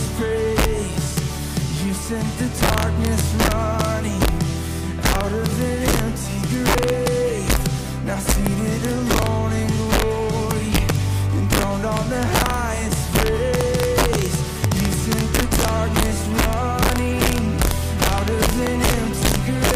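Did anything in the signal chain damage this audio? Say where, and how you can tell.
Yes. Violent cracks break out on the loudest peaks throughout, far harsher than clipping. This is integer overflow at a fixed-point gain or sample-format conversion stage: with about 5 dB of overdrive, around one percent of samples exceed full scale and wrap to the opposite sign.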